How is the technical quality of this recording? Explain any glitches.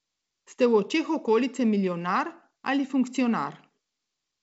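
The recording has no glitches: the speech comes through G.722 wideband telephone coding at 64 kbit/s, which leaves nothing above 7.7 kHz, and the coding itself leaves at most a faint trace on the sound.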